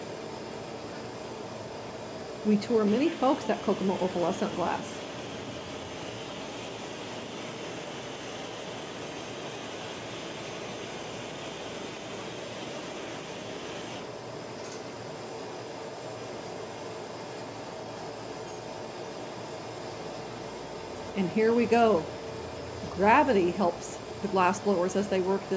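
No faults can be heard: the signal carries the ordinary traces of call microphone processing, with the lowest bass trimmed away and nothing above 8 kHz.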